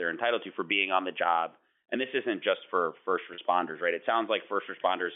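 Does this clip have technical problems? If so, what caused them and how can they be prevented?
Yes. Packet loss with pitch repetition occurs from 3.34 to 3.38 s, just after "isn't just for first". About 40 ms of audio went missing, which fits two lost 20 ms packets. The receiver bridged the gap by repeating the last pitch period, so the sound briefly holds with a buzzy quality before the speech resumes. Forward error correction or a more reliable network path would prevent these dropouts.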